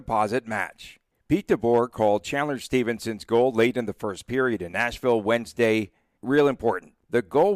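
No technical faults can be heard anywhere in the recording.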